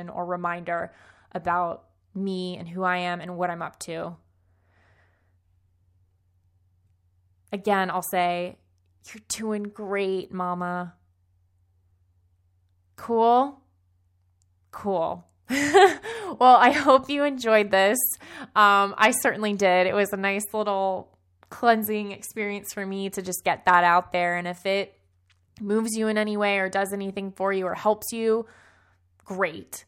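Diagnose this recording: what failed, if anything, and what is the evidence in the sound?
Nothing failed in this recording, and the sound gives no evidence of a fault at any stage.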